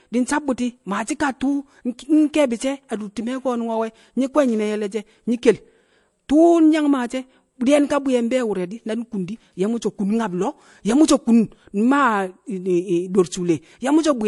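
Low-bitrate audio saved at a high bitrate, likely an MP3 first encoded at something near 48 kbit/s and then re-encoded much higher. Throughout the speech, nothing sounds above 11.3 kHz, and the dull, smeared quality of the first encoding remains. The larger second pass restores none of it.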